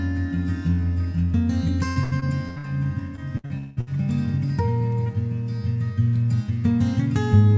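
Music, carried over a call link whose band stops at 8 kHz (which fits a G.722 wideband codec), with repeated packet loss (robotic sound) from 1.88 to 2.66 s and again from 3.16 to 3.89 s. Each stretch holds five holes, the longest about 82 ms in the first and 190 ms in the second, patched by stretching the previous sound over roughly 41% and 51% of the span. That smeared, choppy repetition, rather than clean silent dropouts or a single glitch, marks it as concealed, recurring loss.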